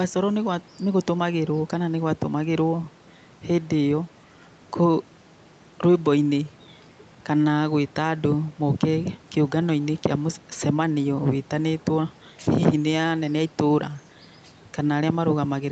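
No technical faults occur at any point in this speech clip, so there is nothing to place in time order.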